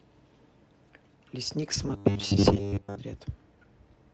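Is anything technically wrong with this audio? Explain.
Yes, two kinds of fault affect this speech clip, which has passed through an Opus call path at 24 kbps.

Lost packet rebuilt from error correction, at 1.61–1.75 s and 2.47–2.57 s: lost audio was replaced with low-bitrate copies carried in the following packets, so there is no gap, but about 80 ms and 60 ms respectively sound rougher and noisier.

Robotic sound from repeated short buffers, from 1.89 to 2.99 s: a rigid, metallic 100 Hz buzz replaces most of the sound. The likely cause is late-arriving audio being filled by repeating roughly 10 ms buffers.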